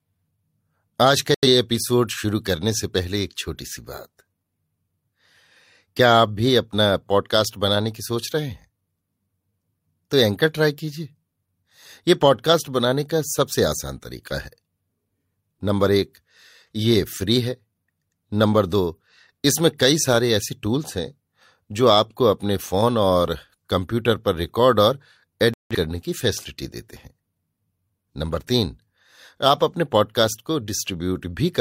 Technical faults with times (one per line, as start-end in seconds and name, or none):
1.34-1.46 digital broadcast dropout
25.54-25.75 digital broadcast dropout